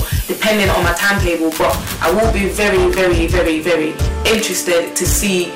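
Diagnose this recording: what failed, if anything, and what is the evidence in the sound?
Harsh fuzz rides on every loud moment throughout: hard clipping, with the level driven about 18 dB past a converter or format ceiling, flattening roughly a fifth of samples.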